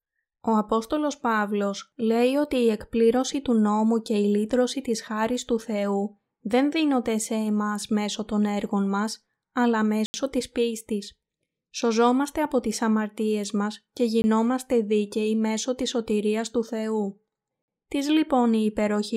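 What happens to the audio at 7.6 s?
Nothing goes wrong at 7.6 s; the speech runs through that moment intact, with no dropout, click, glitch or other break in the signal.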